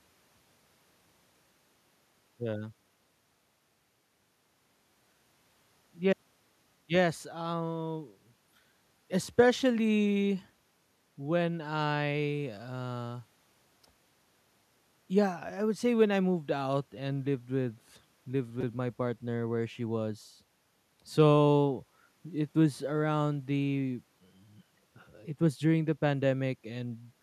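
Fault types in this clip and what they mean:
Repeated buffer: when fresh audio failed to arrive in time, the playback device replayed its last block, here a slice of about 5.3 ms that fits a 256-sample buffer, four extra times between 18.61 and 18.63 s, dropping about 20 ms of speech. So small a block looping at roughly 188 Hz gives a brief buzz. A waveform shows one identical short shape tiled with hard steps at each join. A spectrogram shows thin vertical click lines over an evenly spaced harmonic comb.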